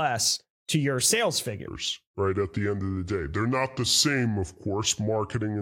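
Section at the wrong speed from 1.68 s to the end: speech runs at 0.745 times speed, about five semitones down, likely from clock mismatch.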